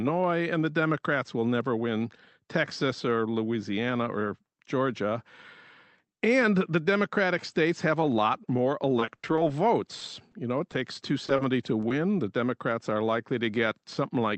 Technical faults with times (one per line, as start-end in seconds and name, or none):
8.99-9.42 repeated packet loss (robotic sound)
9.99-10.03 short concealed packet loss
10.31-10.38 short stall from a late packet
11.27-11.41 short concealed packet loss
11.81-11.93 short concealed packet loss